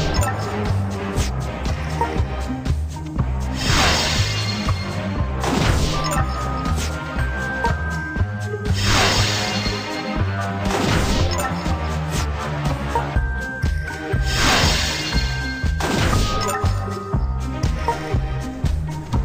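No faults turn up anywhere in the recording: no dropouts, no clicks, no distortion, no level or timing problems.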